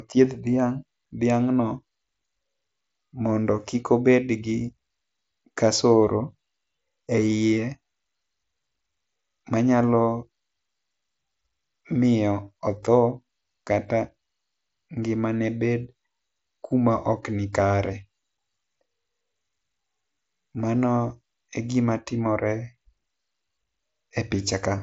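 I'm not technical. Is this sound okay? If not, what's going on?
Yes, this sound is okay; nothing here is wrong.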